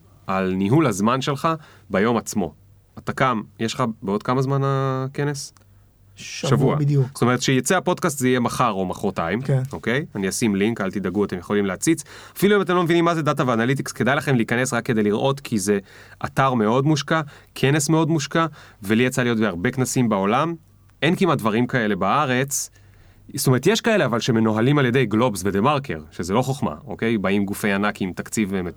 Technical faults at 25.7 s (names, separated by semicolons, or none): none